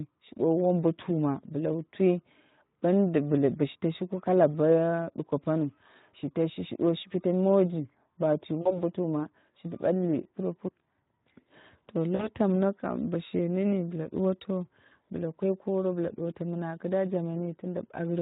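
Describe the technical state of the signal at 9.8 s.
At 9.8 s the speech carries Speex codec damage, present from start to end of the clip rather than at that moment alone. Speex is a CELP coder that models the voice with a predictive filter and a coded excitation; the starved excitation here fits a low-rate setting near 11 kbps. Too few bits reach that excitation, so the speech at 9.8 s sounds plainly noisy and hoarse.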